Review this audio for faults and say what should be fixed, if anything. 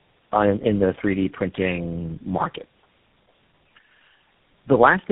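Tandem speech coding runs through the whole clip: the call crossed several links with different speech codecs, so it was decoded and re-encoded at each border, and every coder had to work on the damage left by the one before. The roughness and warble suggest about four speech coders in a row, ending in GSM full rate, with nothing above 3.7 kHz, so the speech sounds muffled, gritty and unsteady. To prevent it, pass speech through the network without transcoding, keeping one codec end to end.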